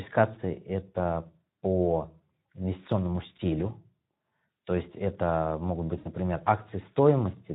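Throughout, the speech sounds hoarse and noisy, the plainly audible damage of the Speex codec, whose starved excitation fits a bitrate near 11 kbps. From 5.97 to 6.08 s the speech smears into a fading, buzzy tone or coloured noise: VoIP packet loss concealed by the speech codec, which stretches the last sound across about 80 ms of missing audio.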